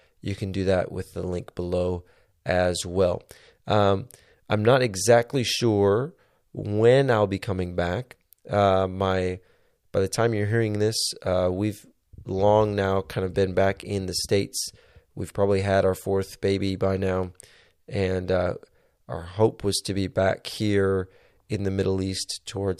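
No technical faults can be heard anywhere in the speech recording. There is nothing here that calls for a time mark or further comment.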